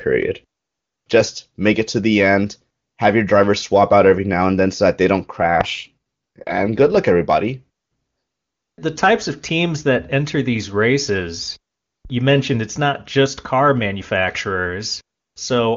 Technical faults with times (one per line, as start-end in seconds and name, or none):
5.32-6.98 AMR rate drop
12.05-12.12 phantom power thump